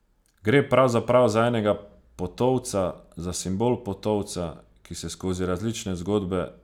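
No technical faults occur at any point in the speech, so there is nothing to place in time order.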